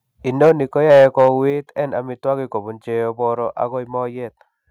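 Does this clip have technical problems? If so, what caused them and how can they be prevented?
Yes. Microphone overload occurs at 0.41–0.52 s and 0.9–1.29 s. The loudest peaks turn harsh and crackly, likely because the input gain drove them about 4 dB past the converter's limit, flattening their tops. Unlike a volume step, this distorts the sound rather than quietening it. Lowering the input gain so peaks stay below full scale prevents it.

The microphone volume stepped down at 0.49 s by about 2 dB and at 1.5 s by about 5 dB. Speech and background drop together without added distortion, likely because the call software cut the input volume after the clipped peaks. Turning off automatic microphone adjustment and setting a safe level beforehand prevents it.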